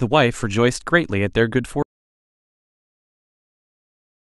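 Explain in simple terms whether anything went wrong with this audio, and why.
Something did go wrong: at 1.83 s the speech cuts out mid-flow and never comes back. That's an audio dropout to silence. The rest of the clip is dead silence with no room tone at all, most likely because the input was lost while recording carried on.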